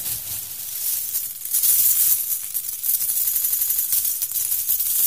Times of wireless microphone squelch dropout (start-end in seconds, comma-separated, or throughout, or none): none